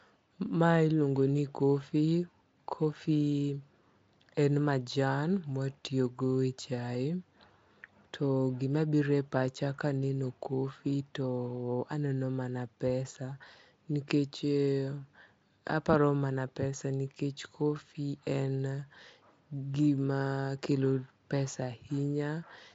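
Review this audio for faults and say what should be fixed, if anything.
No faults turned up, so nothing needs to be fixed.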